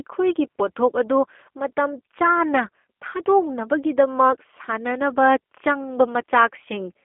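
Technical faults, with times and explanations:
Throughout, G.729 codec: the speech has been rebuilt by a low-rate speech coder, and the result fits G.729A at about 8 kbit/s. Content sits on a telephone band of roughly 250 Hz to 3.4 kHz, with nothing above 3.4 kHz. The coder keeps only a vocal tract filter, a pitch predictor and a few pulses per 10 ms frame, not the waveform itself, so the speech sounds plainly rough and synthetic.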